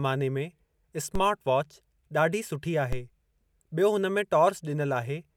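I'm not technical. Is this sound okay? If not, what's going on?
No, there are two DC steps, at 1.15 s and just after "ॾाढी सुठी" at 2.93 s: the signal's baseline suddenly jumps, giving a low thump, then quickly fades back.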